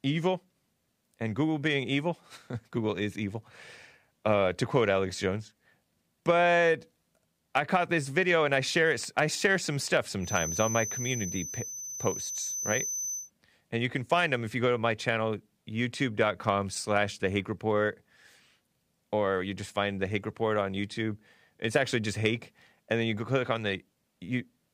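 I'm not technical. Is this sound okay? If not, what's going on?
No. Loudspeaker sound was likely looping back into the microphone, creating a feedback whistle: a thin, high tone beneath the speech from 10.18 to 13.31 s.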